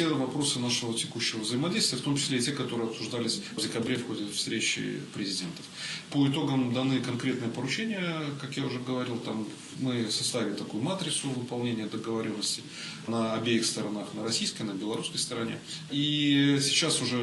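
No technical faults can be heard anywhere here.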